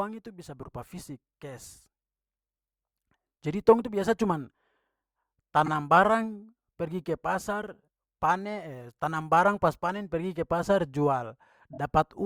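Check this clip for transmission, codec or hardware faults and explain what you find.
Two short stutters in the speech point to repeated frames. At 5.65 to 5.68 s, a block of 24 ms plays one extra time. At 11.73 to 11.78 s, a 24 ms block plays twice more. Each block fits a single compressed frame that was written or sent again. The decoder plays it back as received. The result is a quick catch in the speech. The clip grows by 24 ms and 48 ms.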